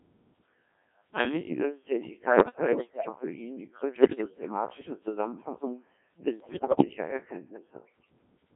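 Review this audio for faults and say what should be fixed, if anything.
The speech runs through the Codec 2 vocoder for the whole clip, and the heavy robotic buzz suggests a mode near 1.3 kbit/s. The decoder rebuilds each frame from sine waves using only pitch, voicing, energy and an envelope, so the original waveform is gone. On a spectrogram the harmonics look unnaturally regular and smeared, confined to roughly 200 Hz to 3.5 kHz. The waveform looks synthetic and evenly periodic. Prevention: carry the speech on a higher-rate codec that preserves the waveform.

Bit errors on the digital voice radio hit from 2.30 to 3.09 s, from 3.96 to 4.49 s and from 6.40 to 6.85 s. The first burst sounds like about one bit in ten flipped, and the later two somewhat worse. Each corrupted bit resets the pitch, level or spectrum of a whole frame, so the audio lurches into bleeps, warbles and gibberish. 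A spectrogram shows abrupt frame-by-frame jumps in harmonic spacing and energy, and the waveform shows blocky level steps. Prevention: add stronger error protection or stay well inside coverage.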